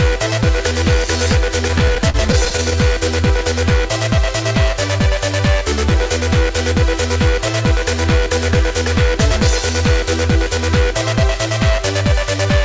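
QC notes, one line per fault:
1.68–2.77 s, repeated stalls (stutter): packets reached the receiver late or more slowly than they were played, so the jitter buffer ran empty 11 times. Each time the receiver stretched the last sound until playback could resume, about 153 ms in all (roughly 15% of that stretch), the longest gap 41 ms, with nothing lost. The audio drags and hitches. The spectrogram shows short smeared, repeated slices, all below 8 kHz from the G.722 call codec, and the waveform shows brief duplicated stretches.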